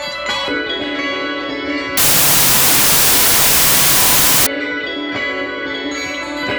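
A wrong sample width from 1.97 to 4.47 s, consistent with 32-bit samples read as 16-bit, buries these sounds under loud noise, slowed to half speed and lower in pitch.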